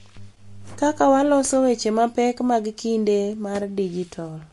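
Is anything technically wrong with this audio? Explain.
Yes, there's plainly audible MP3 compression running through the whole clip, likely from a low bitrate around 48 kbps. Nothing survives above about 11.3 kHz, and weak frequency lines flicker in and out between frames, so the speech sounds watery and swirly, with smeared consonant attacks.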